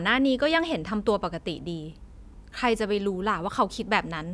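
Nothing in the speech recording stands out as a technical fault; there are no glitches, dropouts or other audible problems from beginning to end.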